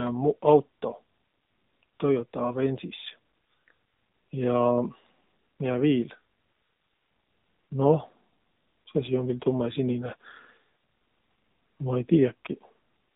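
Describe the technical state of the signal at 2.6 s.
At 2.6 s the speech is still passing through the AMR narrowband mobile codec, which runs through the whole clip. The signal has been reduced to 8 kHz sampling and rebuilt from a vocal-tract model excited by a handful of pulses per 5 ms subframe, and the coding sounds like one of the lower modes, around 7.4 kbps. As a result, nothing above 4 kHz survives, and the voice comes across clearly buzzy and synthetic.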